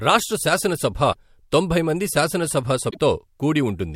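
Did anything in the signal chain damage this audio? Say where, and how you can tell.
Yes, at the codec. At 1.12 to 1.16 s, after "రాష్ట్ర శాసనసభ", and at 2.89 to 2.98 s, after "తొంభై మంది శాసనసభ", the sound skips forward through a brief glitch. That points to a likely broken MP3 bit reservoir: after frames were lost, decoding borrowed another frame's bytes.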